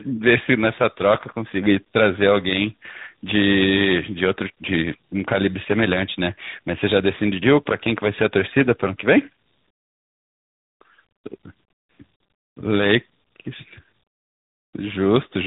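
Throughout, tandem speech coding: two speech codecs in a row, fitting a G.726 then AMR-NB chain, compound their damage, giving rougher, warblier speech than one codec, with nothing above 3.8 kHz.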